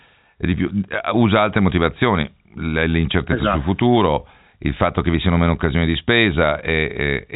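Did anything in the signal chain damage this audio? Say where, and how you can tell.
No, nothing in this speech stood out on listening as damage from any stage of the chain.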